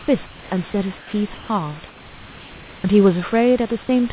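Comfort noise replaces the background in four pauses of this speech: 0.00–0.08, 0.26–0.50, 0.98–1.13 and 1.34–1.49 s. The real room noise gives way to flat, featureless hiss, about 2 to 4 dB quieter. Discontinuous transmission is the likely cause.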